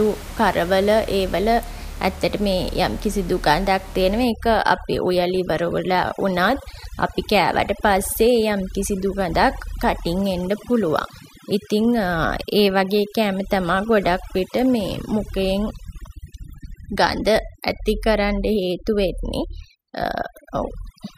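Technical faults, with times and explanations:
4.24–21.2 s: overdone noise removal. Over-strong reduction switches off bands near the room noise, leaving twinkling near-silence between phrases and taking quiet parts of the voice with them.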